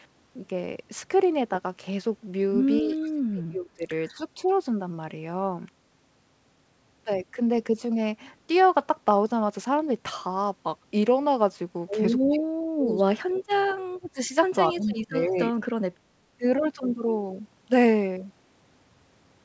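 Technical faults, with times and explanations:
2.82–3.87 s, 4.17–4.25 s, 4.44–4.52 s, 12.3–13.59 s, 13.88–14.34 s and 14.71–15.37 s, speech suppressed in double talk: The speech dips and breaks up in pieces. The longer stretches drop by up to about 30 to 40 dB, the short ones near 4.2 and 4.5 s by about 10 dB. Both sides were likely talking at once, so the echo canceller treated the near voice as echo and turned it down.
4.08–4.23 s and 14.8–14.92 s, echo leak: A faint scrap of the voice returns about 274 ms late, roughly 30 dB below the speech. It is brief. This is likely loudspeaker sound that the far side's echo canceller failed to remove and sent back down the line.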